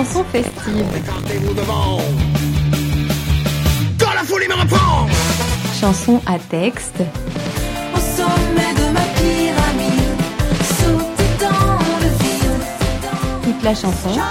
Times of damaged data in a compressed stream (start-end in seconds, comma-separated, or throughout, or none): none